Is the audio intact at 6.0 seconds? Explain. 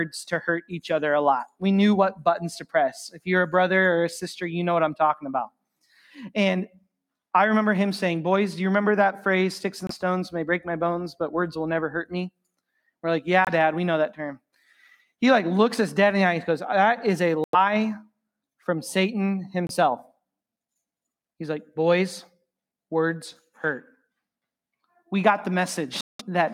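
No. At 6.0 seconds the audio shows sound cut by the noise suppressor, running from 5.92 to 6.09 s. The suppressor misjudged this stretch as background noise and applied extra gain reduction to it, pulling it down by as much as about 7 dB compared with the surrounding audio. The result is a brief dip of roughly 150 ms where the sound sinks before the level recovers.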